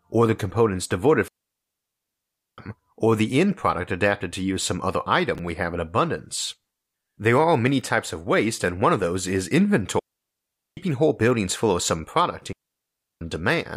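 A digital wireless dropout at 1.28 to 2.58 s: the receiver lost too much data and muted with a very short fade, leaving 1.3 s of clean near silence with no noise burst. At 5.35 to 5.39 s, chunks out of order: a 10 ms chunk arrived three chunks late and plays after its successors, giving a brief jumbled moment with hard joins. Two more digital wireless dropouts follow, 9.99 to 10.77 s and 12.52 to 13.21 s, the same clean silent holes lasting about 0.78 s and 0.69 s.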